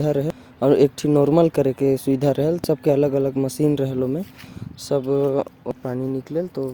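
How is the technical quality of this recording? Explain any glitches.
The recording has three brief glitches from damaged data in a compressed stream, at 0.30 s, 2.64 to 2.66 s, and 5.71 s. Corrupted bytes make the decoder misread frames and lose sync while it hunts for the next header, producing short chirps or blips in the speech.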